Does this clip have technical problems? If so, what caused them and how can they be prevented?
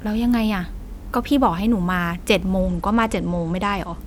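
Yes, from 2.60 to 3.99 s there's a Bluetooth SBC bit pool drop: the treble dulls and turns gritty, which fits a congested link cutting the bit pool from 28 to 12. Keep the phone close and clear 2.4 GHz interference to prevent it.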